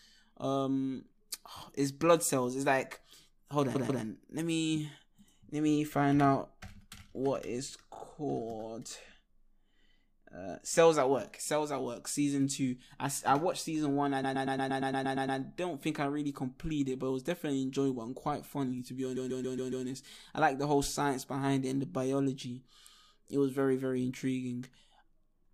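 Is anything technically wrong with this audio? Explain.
Yes. The speech has repeated frames, heard as stutters at four points. At 3.74 to 4.02 s a 129 ms block plays twice more. At 7.94 to 8.01 s a 28 ms block plays twice more. At 14.23 to 15.39 s a 116 ms block plays ten more times. At 19.15 to 19.85 s a 139 ms block plays five more times. Each time, a run of compressed frames was written or sent again. The decoder replays that slice and lengthens the clip.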